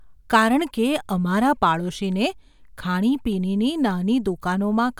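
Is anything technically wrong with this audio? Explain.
No, nothing technically wrong can be heard here.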